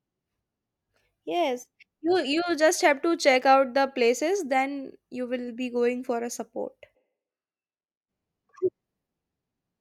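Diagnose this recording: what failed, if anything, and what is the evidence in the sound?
Between 6.97 s and 8.07 s the speech turns abruptly roomy and hollow, with thinner low end, then snaps back just as suddenly. The level stays about the same, but background room noise rises to roughly 30 dB below the speech. This points to a switch to a distant microphone at the capture stage, in the analogue wiring or input selection: the close mic's feed likely dropped out and a far mic filled in.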